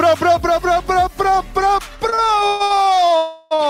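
Repeated stalls (stutter) run from 2.09 to 2.83 s: five gaps, the longest 135 ms, where late packets emptied the jitter buffer and the last sound was continued, dragging the audio. A call audio freeze follows at 3.17 to 3.53 s, with the sound held on for 341 ms without going silent before resuming where it stopped, likely because packets were held up in transit. A short stall from a late packet at 3.55 to 3.61 s stretches the preceding sound by 39 ms until the packet arrives, then continues.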